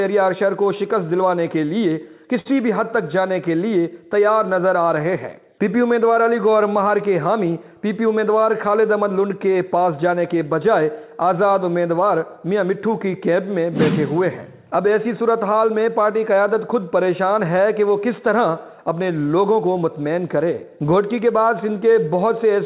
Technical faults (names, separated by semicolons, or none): short stall from a late packet